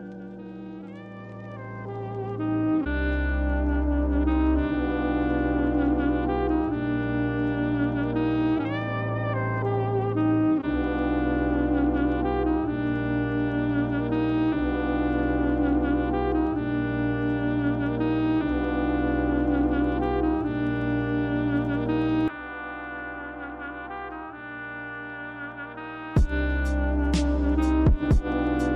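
From the start to 19.58 s the top end sounds dulled, with the brightest detail thinned out by a fixed notch somewhere around 10 kHz. This is channel delay causing comb filtering: one channel lags the other by a tiny fraction of a millisecond, which fits a delay of a couple of samples, and when the two are summed to mono, content common to both cancels at that frequency and its odd multiples.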